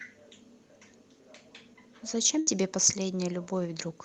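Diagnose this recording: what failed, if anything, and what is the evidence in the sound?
Network stage, burst of packet loss: from 2.39 to 2.49 s the speech is held and faded by concealment for about 73 ms, and roughly 80 ms of speech goes missing, unlike a silent dropout.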